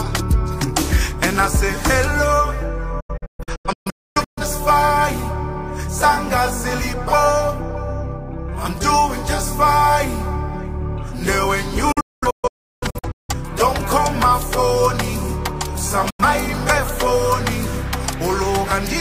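The receiver repeatedly lost frames and muted until clean frames returned, a digital broadcast dropout that occurs three times. From 3.0 to 4.42 s, about 0.9 s of audio vanishes in several short holes, the longest 0.26 s. From 11.92 to 13.34 s, about 0.98 s goes in the same way, the longest hole 0.34 s. At 16.10 s an 85 ms gap appears. Each mute fades in about 8 ms, so the sound drops out abruptly. What was broadcast during those gaps is gone.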